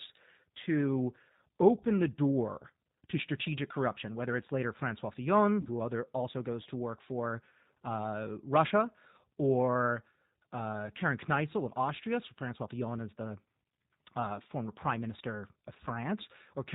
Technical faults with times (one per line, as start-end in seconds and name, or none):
0.00-16.74 G.729 codec
5.61-5.68 VoIP packet loss concealed by the speech codec